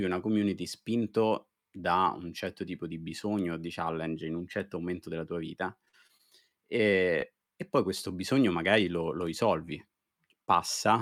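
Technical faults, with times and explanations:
5.85–6.21 s, repeated packet loss (robotic sound): right after "momento della tua vita" the speech turns choppy and robotic, as repeated short gaps, up to 45 ms, were patched by extending earlier sound.
10.46–10.50 s, short concealed packet loss: a brief smear or wobble where roughly 20 ms of audio never arrived and the gap was bridged by continuing the preceding sound.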